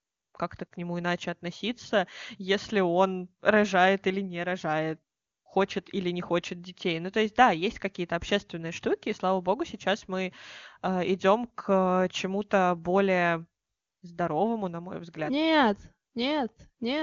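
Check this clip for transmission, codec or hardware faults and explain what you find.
Nothing stood out on listening to this speech, which comes across as ordinary AMR wideband (HD Voice) audio with its content stopping at about 7.2 kHz.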